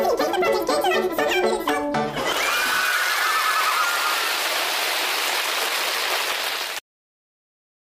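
From start to finish the sound runs at double speed and a full octave (12 semitones) high. This is audio read two samples at a time: pairs of samples are taken as one frame, which fits a mono stream misread as stereo or a sample width doubled.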